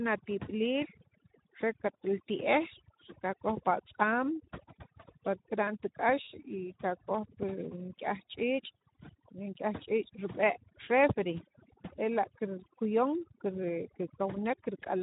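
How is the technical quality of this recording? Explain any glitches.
The technical quality is poor, with two faults running through the whole recording.

Overdone noise removal, throughout: The background drops to near silence dotted with twinkling specks. An overly aggressive noise reducer is cutting individual frequency bands whenever they approach its noise estimate, stripping away quieter parts of the speech along with the noise.

Speex codec, throughout: The speech sounds hoarse and grainy, with plainly audible coding damage, and nothing is present above 3.8 kHz. This narrowband CELP speech codec has too few bits to model the excitation cleanly, which fits a low setting of around 11 kbps.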